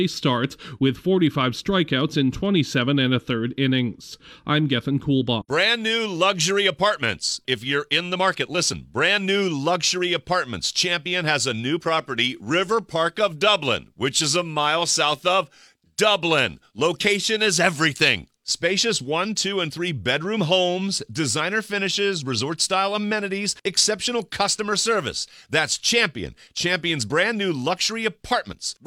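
No technical faults can be heard at any point in the audio, with the signal holding steady and continuous throughout.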